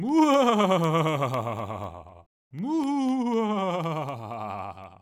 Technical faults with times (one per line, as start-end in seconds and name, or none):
0.09-4.84 periodic USB or driver dropouts